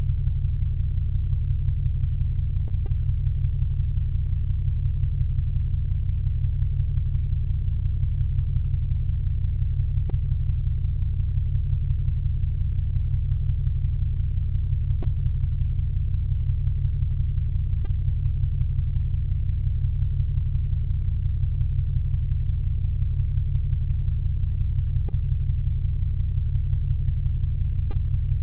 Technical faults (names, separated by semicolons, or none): short concealed packet loss